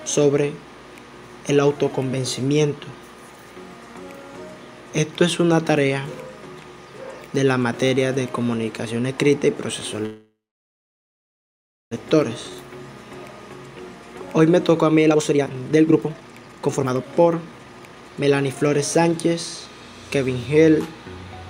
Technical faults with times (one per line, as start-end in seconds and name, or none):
10.05-11.93 call audio freeze
15.06-19.27 jitter buffer speed-up